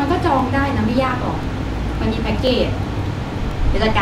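Overlapping chunks cause a short stutter at 0.39, 0.91, 1.43, 1.95, 2.47, 2.99 and 3.51 s. Each lasts 20 ms. The speech was handled in 0.5 s chunks, and each chunk began 20 ms early. That sliver plays twice at every join, giving a regular click.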